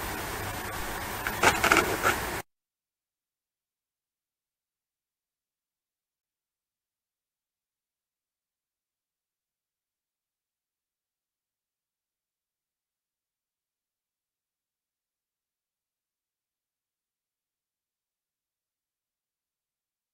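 From 5.47 to 6.96 s there are repeated stalls (stutter): packets kept turning up late, so the jitter buffer ran dry a dozen times. Each gap, none longer than 27 ms, was bridged by stretching the last sound, about 139 ms in all, so nothing's lost but it stumbles along.

Right after, from 7.44 to 8.69 s, comes a jitter buffer slow-down. The receiver rebuilt its reserve by repeating tiny pitch-period chunks, adding 144 ms, so that stretch plays at about 89% speed, drawn out with pitch unchanged.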